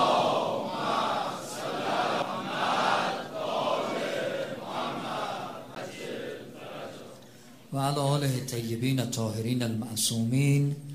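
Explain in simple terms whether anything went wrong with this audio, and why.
A CD skip happens twice, at 2.22 s and 5.75 s: a tiny tick and near-instant mute, then the sound resumes elsewhere as the laser jumps tracks, unlike a dropout's simple gap.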